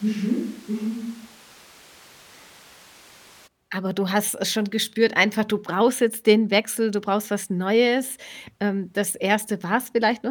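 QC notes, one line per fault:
0.00–3.46 s, switch to a distant microphone: from the first moment the speech sounds roomy and hollow, thinner in the low end, roughly 5 dB quieter, with background noise sitting only about 20 dB under the speech, then at 3.46 s it snaps abruptly to a close, full sound. The likely cause is that the close microphone's feed was missing here, so this stretch carries a farther pickup that hears more room reflections and noise and less of the talker's bass.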